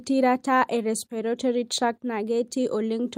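No technical faults can be heard anywhere in the recording. The speech comes through with nothing in the signal that points to a problem in capture or transmission.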